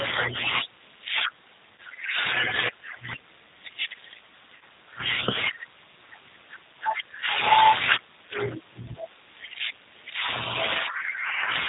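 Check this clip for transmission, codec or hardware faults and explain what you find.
The speech carries a low-bitrate speech codec throughout and three short episodes of concealed packet loss.

G.729 codec, whole clip: the sound is rebuilt from a vocal tract filter, a pitch predictor and a few pulses per 5 ms subframe, so it is plainly rough and slightly synthetic. The damage sounds consistent with 8 kbit/s. Nothing above 4 kHz survives. This differs from an MP3-style transform codec: there is no swirly, watery sparkle in the highs, only a buzzy, model-built texture inside a narrow telephone band.

VoIP packet loss concealed by the speech codec, at 1.76–1.79 s, 4.58–4.61 s and 7.17–7.28 s: packets went missing and the decoder carried its last pitch and filter forward, lowering the gain frame by frame. The first two gaps are about 20 ms and 30 ms long. At 7.17 s, about 50 ms of loss is scattered over 100 ms, with no unbroken run longer than 20 ms. 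Each spot sounds like a brief buzzy smear rather than a silent hole or click. That is what separates it from a plain dropout, and the sound stays weakened for a moment after packets resume.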